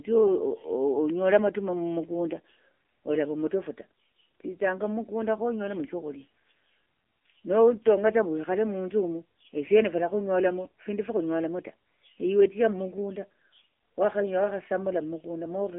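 AMR narrowband mobile codec damage runs through the whole speech clip. Nothing passes above about 3.6 kHz, the band sits between roughly 250 Hz and 3.5 kHz, and the voice has the buzzy, synthetic sound of a sparse pulse-driven vocal-tract model, which fits a low 7.4 kbps mode.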